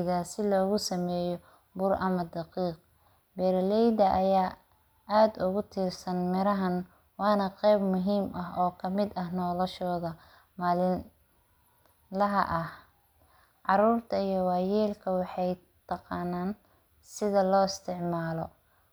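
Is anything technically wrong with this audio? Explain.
No, no technical faults detected.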